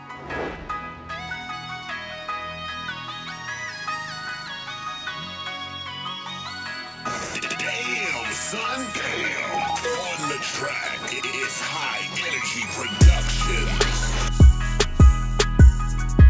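Nothing here sounds wrong: the audio came over a call line whose content stops at about 8 kHz, which fits a wideband G.722 codec at around 64 kbps working just as it should.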